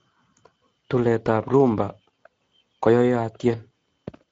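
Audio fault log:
throughout Speex codec. The speech carries plainly audible coding damage for the whole clip. Speex is a CELP codec that rebuilds speech from a vocal-tract filter plus a coded excitation signal. The damage points to a rate near 17 kbps, which leaves little detail for that excitation, so the sound turns rough and grainy. Nothing is present above 7.7 kHz, which fits the codec's wideband mode and its hard upper limit.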